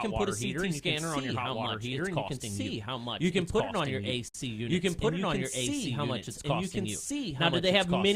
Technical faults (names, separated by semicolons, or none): doubled audio track; gap at a join of encoded pieces